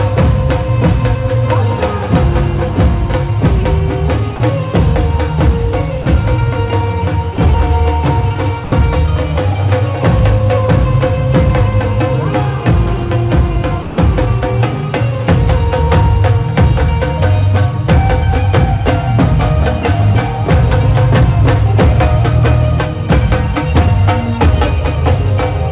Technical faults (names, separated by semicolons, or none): sound dropped by the voice detector